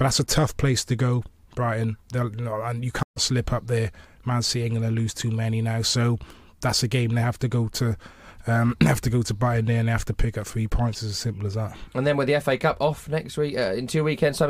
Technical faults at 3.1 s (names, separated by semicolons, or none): stream reconnect